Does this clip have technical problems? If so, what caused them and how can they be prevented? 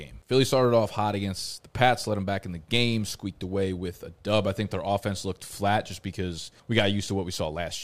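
No, there are no technical problems to prevent here.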